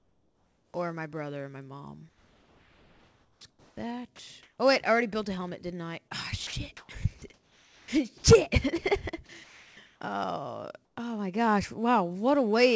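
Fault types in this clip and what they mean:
Comfort noise in place of the background: In the quiet stretches the real room background drops out and a flat, featureless hiss takes over, likely because the sender went silent and the receiver filled the gap with synthetic noise. You hear it from the start to 0.74 s, about 4 dB quieter, then at 9.44 to 10.01 s and briefly at 10.85 to 10.97 s, where it dips about 14 dB below the faint background around it.
Sound chopped by the voice detector: In two stretches the detector likely flips between sending and not sending, so bits of quieter sound get swapped for that same synthetic fill. From 2.09 to 4.58 s nearly 1.8 s of it is replaced, and from 6.47 to 8.24 s about 0.8 s. The result is choppy and gappy, on top of a band that stops at 8 kHz, which fits the G.722 codec on the call path.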